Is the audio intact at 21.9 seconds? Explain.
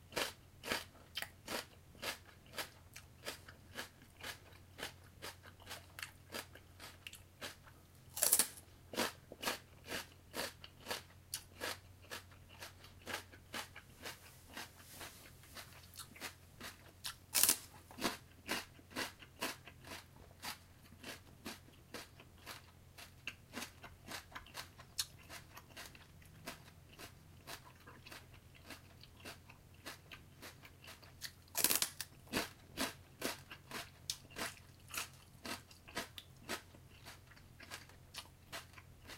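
No. At 21.9 s, as throughout the clip, a truncated block size mismatch cuts off the tail of every block, which fits a writer producing 1024-sample blocks. The result is a 45.9 Hz buzz and sound running 1.07 times fast at normal pitch, unlike resampling, which would shift the pitch.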